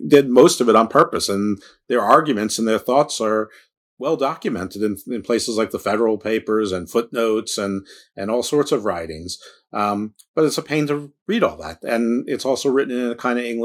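Speech, with microphone overload in three bursts: 0.13 to 0.43 s (about 4 dB over the limit, roughly 2% of samples clipped), 0.76 to 1.03 s (about 2 dB over, under 1%) and 2.1 to 2.16 s (about 3 dB over, around 3%). The loudest syllables there take on a crackling, distorted edge. The cause is likely an input volume set high enough that peaks ran into the converter's ceiling and lost their tops. On a waveform those peaks appear squared off and flattened, and a spectrogram shows a smear of extra harmonics spreading upward across the band during each burst. Alongside this, the microphone volume is stepped down three times: at 0.15 s by about 3 dB, at 1.14 s by about 4 dB and at 2.16 s by about 1 dB. Each time, voice and background drop in level together and at once, likely the call software cutting the device's input gain after detecting clipping. The first step falls inside the first overload burst and the third lands right as the last burst ends. 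On the waveform each shows as a sudden shrink of the envelope, and on the spectrogram as a simultaneous dimming across all frequencies, noise floor included.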